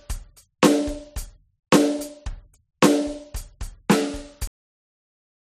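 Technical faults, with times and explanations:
4.47–5.57 s, cut-off end: the music stops mid-sound as final buffers went unwritten, leaving flat digital silence; the waveform drops abruptly to silence and the spectrogram goes blank.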